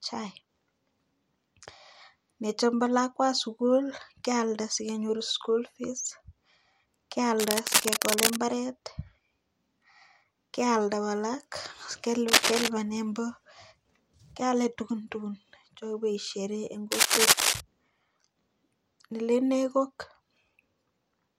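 At 7.39 s a burst of rough, crackling noise sits over the speech for about a second, until 8.39 s. It is about as loud as the speech itself. Shorter bursts follow from 12.28 to 12.68 s and from 16.91 to 17.61 s. These are a little louder than the speech. This is cable scratch noise. The likely cause is a worn cable or connector being moved, so its contact resistance jumps about and adds uneven, scratchy noise.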